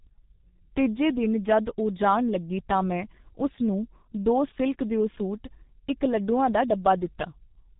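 Throughout, G.723.1 codec damage is heavy: speech is muffled and hoarse, consistent with about 6.3 kbit/s, and a spectrogram shows nothing above 3.8 kHz, with smeared consonants.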